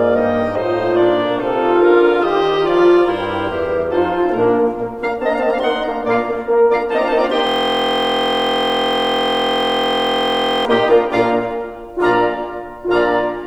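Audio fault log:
7.47–10.65 s system hang loop: a 23.22 ms slice of music repeats over a hundred times, producing a steady 43.1 Hz buzz, which fits a frozen 1024-sample buffer.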